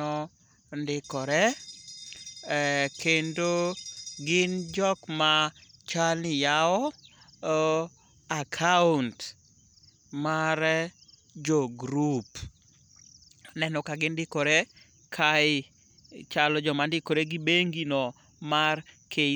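No technical faults are audible.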